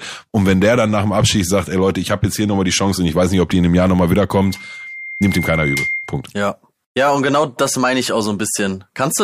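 A speech recording with loudspeaker feedback squeal from 4.39 to 6.24 s: a single 2.1 kHz tone swells over about one and a half seconds to roughly 5 dB below the speech, because the microphone picks up its own loudspeaker and loop gain exceeds one at that frequency. A spectrogram shows a bright horizontal line thickening there.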